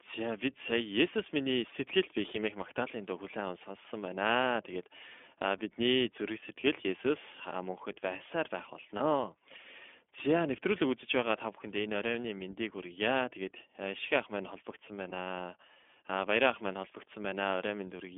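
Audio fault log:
throughout, iLBC codec. The speech is band-limited to roughly 250 Hz to 3.5 kHz. Lows are thin and there is no air above the cut. Each short block of excitation is coded on its own, so the sound is clear but rough and a little synthetic. The damage is plainly audible. The grain fits 20 ms frames at the 15.2 kbps mode. This low-rate narrowband coding flattens fine detail in the voice.
5.58 to 5.61 s, 8.98 to 9.02 s and 15.10 to 15.14 s, lost iLBC frames. Each dropout lasts about 20 ms, which fits a single missing frame. The second comes just after "мөнхөд байсаар байх". In each gap the decoder repeats the last pitch cycle mixed with noise. That makes a brief held, slightly buzzy vowel. Each frame decodes independently, so the voice returns cleanly almost at once.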